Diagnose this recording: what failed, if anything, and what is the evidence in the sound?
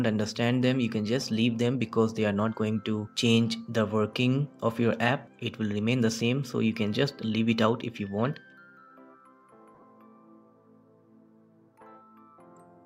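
The lost LE Audio frames fault sits on the Bluetooth link, at 9.75 to 9.83 s. About 37.5 ms of audio went missing in short bursts scattered across 75 ms. The LC3 decoder's concealment filled each gap with the previous spectrum under random signs, so a spectrogram shows tonal lines dissolving into diffuse noise there.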